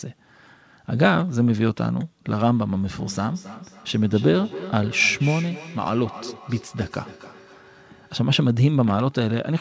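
From 2.92 s to 8.27 s there is feedback echo between two devices. A second device in the room replays the call audio, and its loudspeaker output reaches the first microphone, which that device's echo canceller cannot remove. Each phrase returns roughly every 300 ms, peaking at about 15 dB below the direct speech. A spectrogram shows faint copies of each harmonic pattern trailing the original at that spacing.

Between 8.84 s and 9.11 s a loose connector crackle appears. A worn or dirty contact briefly made and broke, chopping the signal into an irregular scratchy burst. The waveform shows jagged spikes and dropouts over that quarter-second, and the spectrogram shows scattered broadband vertical streaks. Like everything in the clip, they stop at 8 kHz, the ceiling of the wideband call path.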